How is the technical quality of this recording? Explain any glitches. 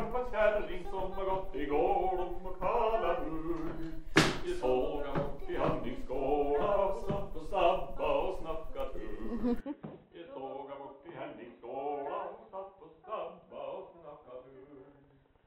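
The recording has one clear fault in its last section. From 9.61 s to the end, the sound abruptly turns dull and boxy with no gap at the change. Nothing is left above 3.9 kHz, the level falls by roughly 10 dB, and a faint new noise floor appears well below the signal. This likely comes from the input switched to a poorer device, a narrower-band microphone or headset profile with its own tone and noise.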